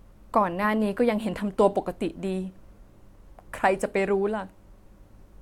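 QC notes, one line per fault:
No fault found in this speech clip.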